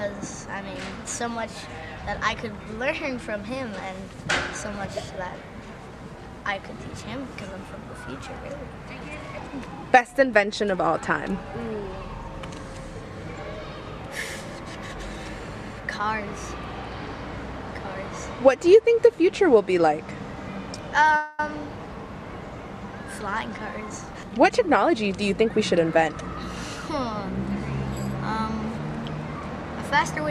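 At 21.16 s the sound stalls for about 0.22 s and the last fragment is stretched into a fading buzz or hiss that never reaches silence, then resumes where it stopped with nothing lost. This is a call audio freeze, likely from delayed packets draining the jitter buffer.

From 23.18 to 25.19 s a jitter buffer speed-up follows. With the backlog of late packets, the receiver trims short pitch-period slices repeatedly, removing about a fifth of a second. Playback runs at 111% speed with unchanged pitch and sounds noticeably hurried.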